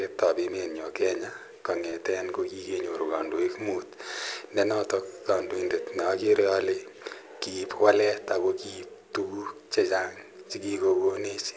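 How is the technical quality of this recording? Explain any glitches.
There's one glitch in this speech, a short concealed packet loss at about 1.90 to 1.94 s. Roughly 20 ms of audio never arrived in time, so the receiver stretched the preceding sound over the gap and blended back in, leaving a quick smear or wobble. The call path's band limit is audible too, with nothing above 8 kHz, which fits a G.722 codec.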